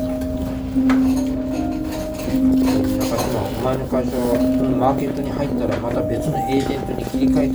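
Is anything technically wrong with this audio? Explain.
Yes, there's a train of clicks from 2.51 to 7.51 s: around 70 irregular pops, nearly 16 per second, peaking about 5 dB above the audio, likely from equipment interference or a faulty connection or power supply.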